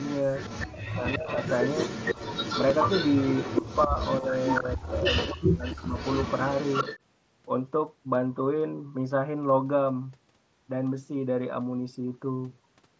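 From the first moment to 0.67 s there is an echo leak: a copy of the far-end talker returns about 281 ms late, roughly 10 dB below the speech, most likely because a loudspeaker-side echo canceller let part of its microphone pickup through. The leak recurs from 0.9 to 5.36 s, louder at about 5 dB under the speech, and again from 5.63 to 6.99 s at about 10 dB down. Each time it sounds like a trailing second voice at that fixed delay.

Speech suppressed in double talk first appears from 0.66 to 1.28 s. With both sides talking at once, the canceller likely couldn't separate its own talker from the echo and pulled the level down hard, as much as about 40 dB for around half a second, so the voice dips sharply. Shorter, shallower dips follow at 3.87 to 3.95 s (about 10 dB), 4.21 to 4.31 s (about 5 dB) and 4.6 to 4.79 s (about 10 dB), heard as brief ducks in level. A deeper one runs from 5.33 to 5.94 s, about 30 dB over roughly 400 ms.

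At 2.70 s there is a single concealed Bluetooth headset packet loss of 7.5 ms. The receiver filled the gap by repeating a closely matching piece of the preceding waveform, so it is nearly hidden within the mSBC audio, which extends to 8 kHz.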